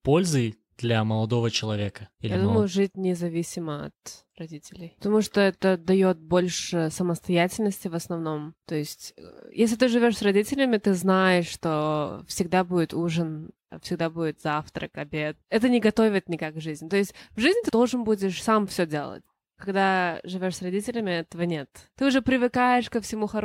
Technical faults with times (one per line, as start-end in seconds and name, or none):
none